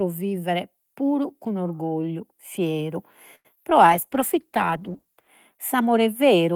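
At 3.35 s a short stall from a late packet begins. The packet arrived late and the buffer ran dry. The receiver held the last sound for 94 ms until it came, to 3.47 s. Nothing is lost. The sound just hangs with a faint buzz, and the delay grows by 94 ms.

Two short concealed packet losses follow. At 3.55 to 3.58 s, 20 ms never arrived. About 17 ms was filled by extending the prior sound, giving a brief smear. At 3.70 to 3.73 s, another 20 ms is missing with no fill. The audio skips ahead, and the delay shrinks by about 20 ms.

From 3.82 s to 5.35 s comes a call bitrate drop. The bandwidth estimate fell, so the encoder went from 48 to 13 kbps. It stayed at its lowest for about 1.4 s. Coding turns coarse, and the sound becomes rough and watery until it recovers.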